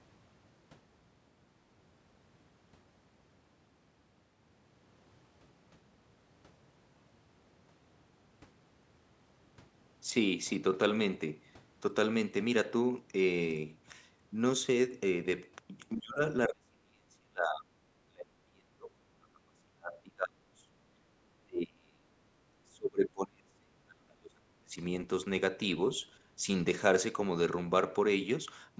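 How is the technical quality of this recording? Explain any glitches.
The second half of the clip has repeated dropouts in the speech. The first half shows no such trouble, and the whole recording runs through call microphone processing, with its bass roll-off and nothing above 8 kHz.

Speech suppressed in double talk occurs at 15.97–16.21 s, 16.48–17.71 s, 18.06–20.71 s, 21.42–22.14 s and 22.63–24.79 s. The likely cause is an echo canceller that heard far-end audio over the talker, could not separate the two, and pulled its own talker down. The voice dips by about 25 dB in the first event and about 35 dB in the later ones, cutting out in chunks.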